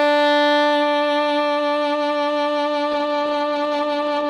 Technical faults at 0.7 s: none

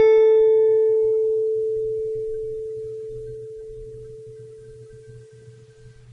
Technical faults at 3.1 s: Vorbis compression

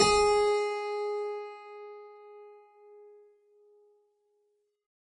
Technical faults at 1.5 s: MP3 compression

